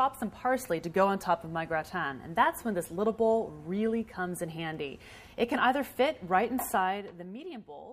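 No technical faults can be heard anywhere in the recording; the signal stays intact throughout, with no dropouts, distortion or other defects to report.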